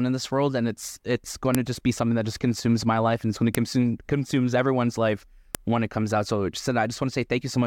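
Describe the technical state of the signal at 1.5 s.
At 1.55 s, between "and it's it's going" and "to just be something", there is a file header played as audio. Where two separately written WAV pieces were joined, the second piece's header was left in place, so its few dozen bytes of metadata are decoded as sample values. The result is a single sharp, loud click lasting about a millisecond. It is unrelated to the speech around it and sits right at the splice point.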